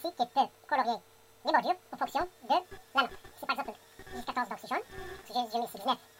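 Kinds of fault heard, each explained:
Wrong sample rate: The samples play about twice as fast as recorded, likely 22 kHz audio played at 44.1 kHz. Everything runs double speed, a full octave higher.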